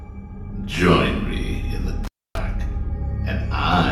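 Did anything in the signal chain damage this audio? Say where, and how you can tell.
Yes. An intermittent contact in the analogue wiring breaks the signal from 2.04 s to 2.38 s. A loose plug or cable conductor loses its connection for about 275 ms, and the sound drops out almost entirely. Crackle marks both edges as the contact scrapes open and then closed again. While the line is open, only faint hiss remains. That is the noise of the input stage with nothing driving it, not a gap inserted digitally.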